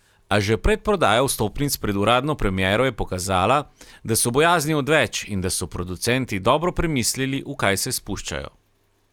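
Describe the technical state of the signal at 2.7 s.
At 2.7 s the speech signal is intact, with no audible fault at that moment.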